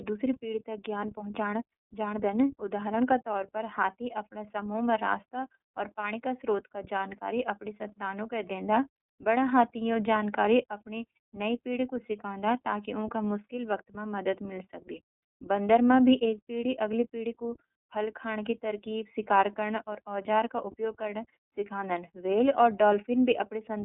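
From start to finish the speech sounds boxed-in and thin, with a plainly audible rough, slightly synthetic grain on every syllable and nothing left below about 250 Hz or above 3.6 kHz. That is the iLBC codec at work. This narrowband VoIP coder discards the upper band entirely and codes each block of excitation on its own, without help from the previous one. Here it runs on 30 ms frames at around 13.3 kbps.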